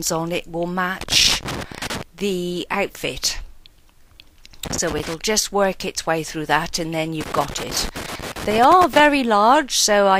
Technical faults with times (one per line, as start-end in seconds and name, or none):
1.01-2.03 loose connector crackle
4.65-5.14 loose connector crackle
7.21-9.00 loose connector crackle